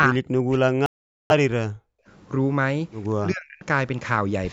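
From 0.06 to 1.94 s, the speech dips by as much as roughly 40 dB in places. This is speech suppressed in double talk, likely an echo canceller ducking the talker while the far side also spoke. At 0.86 s, the sound cuts to silence for 0.44 s and resumes at 1.31 s. This Bluetooth stall likely came from held-up packets draining the headphone buffer. At 3.2 to 3.64 s, the speech ducks again by around 40 dB. This is the same double-talk suppression, briefer this time, in audio that carries nothing above 8 kHz.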